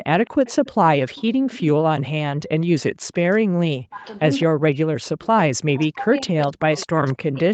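Speech, heard through a call with a couple of echo-control problems. There's an echo leak: a copy of the voice trailing about 208 ms behind, around 20 dB down from 0.25 to 1.6 s and again from 6.41 s to the end, plus a faint scrap near 40 dB down at 2.61 s, likely the far end's loudspeaker sound slipping past its echo canceller. Then there's speech suppressed in double talk: the voice drops out briefly from 2.32 to 2.43 s and is pushed down by as much as about 40 dB in pieces adding up to roughly two seconds between 3.67 and 7.36 s, likely the canceller ducking everything while both sides talk at once.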